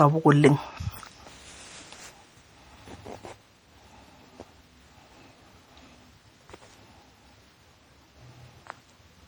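Throughout the speech there is a swirly, hollow smear with softened consonant attacks, beyond what a single encode around 64 kbit/s would give. This points to generation loss, likely from about seven successive MP3 passes, each requantising on a shifted frame grid so that noise and spectral holes accumulate.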